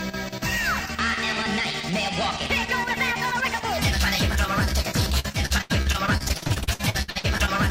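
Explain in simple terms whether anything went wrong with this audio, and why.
Repeated packet loss (robotic sound) hits from 5.19 to 7.60 s. In that stretch, 26 short gaps appear, the longest 82 ms. Each one was patched by stretching out the sound just before it, so about a third of the stretch is filler, and it sounds choppy.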